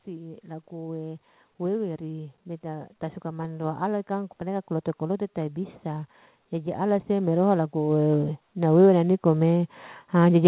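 Automatic gain rising runs from 0.05 s to the end of the clip at about 10.48 s. The gain control judged the incoming speech too quiet and kept pushing its gain upward, so the voice and the background noise swell together as a slow, steady climb in loudness rather than a sudden jump. Everything arrives through a narrowband call path with nothing above 4 kHz, which fits G.711 A-law at 64 kbps.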